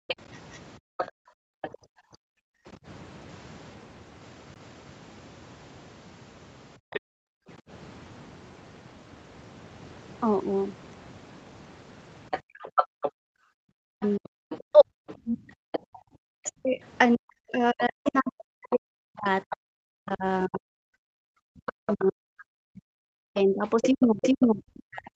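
From the start to 2.65 s the room background is gated by the echo canceller. While the far-end signal plays on the loudspeaker, the canceller cuts the microphone hard, by as much as about 39 dB. The ambience drops out in pieces that add up to roughly one and a half seconds and comes back each time the gate releases.

Between 0.08 and 1.7 s a second voice sits under the talker, around 10 dB down. This is likely the other side's voice leaking through: the device's loudspeaker output reaches the microphone and the echo canceller leaves some of it in.

At 4.54 s there is a CD skip. The laser jumps to a different turn of the disc spiral, and the player mutes for roughly 20 ms. The result is a short tick, and playback picks up from a different point in the track.

From 6.78 to 7.48 s the gating happens again, with the background dropping by up to about 37 dB for roughly 0.7 s in total. Inside that stretch, from 6.90 to 7.00 s, a short scrap of leaked far-end voice comes through about 15 dB below the talker.

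From 12.31 s to the end, the leaked voice returns and stays, again roughly 10 dB below the main speech. From 12.42 to 16.05 s the background is gated once more, down by up to about 38 dB, for around a second in total.

From 13.80 s to the end the talker's own voice dips, loses its top end and breaks up. At its worst it falls by around 40 dB while the far-end voice is present. This is likely speech suppressed in double talk: with both sides active, the canceller cannot separate near speech from echo and attenuates both.

A second CD skip falls between 24.19 and 24.22 s. It mutes for roughly 30 ms, leaving a tick and a jump in position.

The top end of the whole clip stops at 8 kHz, which comes from the Opus call path and the call microphone processing.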